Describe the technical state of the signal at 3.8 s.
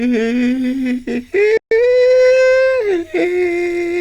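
At 3.8 s the music plays through intact, with no technical fault at that moment.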